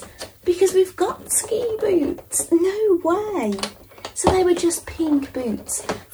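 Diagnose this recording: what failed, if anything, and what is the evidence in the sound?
The fault is low bit depth with noise shaping, introduced at the sample-format conversion stage. A steady, thin hiss runs under the sound for the whole clip, weighted toward the top of the band and sitting roughly 30 dB below the signal. The audio has been requantised to 10 bits, and the rounding error was fed back and shaped so that it lands mostly in the high frequencies, where it is heard as a bright, constant wash.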